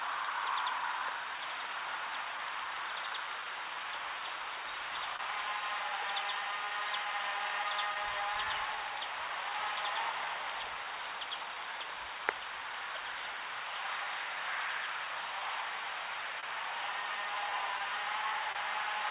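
Clock drift between sender and receiver runs through the whole clip: the sender's clock is roughly 3 percent slow, so the receiver's jitter buffer keeps draining and must be topped up. The result is a faint, uneven unsteadiness in pacing rather than any single obvious defect.

Repeated timing corrections run from 0.01 s to 18.23 s. The receiver stretches the audio to about 98 percent speed, inserting repeated fragments that add up to roughly 0.4 s. The repeats are unevenly spaced, so the tempo drags slightly and occasionally hiccups.

A short stall from a late packet occurs at 5.16 to 5.21 s. The buffer ran empty, and the receiver held the last sound for 28 ms until the packet arrived. Nothing is lost, but that moment sustains briefly, with a slight buzz or dip, and latency rises by 28 ms.

Scattered short gaps fall between 16.40 and 18.57 s. Around four late or lost packets were concealed by extending the preceding audio, about 70 ms in total, the longest near 30 ms. 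They are audible as small ticks and smears over the G.711 path's 4 kHz-limited band.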